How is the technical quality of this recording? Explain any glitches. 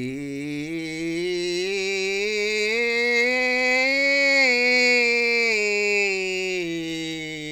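The music recording has no audible glitches.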